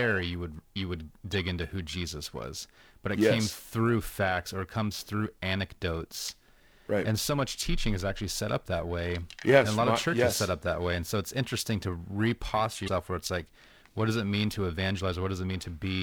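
Periodic clock jitter runs through the whole recording. Something is shaking the converter's sampling clock at a steady rate of around 1 kHz, so each frequency in the speech picks up sidebands spaced about 1 kHz above and below it. Higher components pick up stronger sidebands, which gives sibilants and bright vowels a rough, metallic edge. That edge disappears in the pauses, where there is nothing for the wobble to act on.

Damaged data in the compressed stream appears first at 1.33 to 1.35 s, between "you would you would" and "into who", and again at 12.84 to 12.89 s, between "it's interesting to reposture" and "where it's like what". Each time, part of the encoded data is corrupt. The decoder misreads the affected frames, loses sync and hunts for the next valid header. This produces a brief glitch at each break.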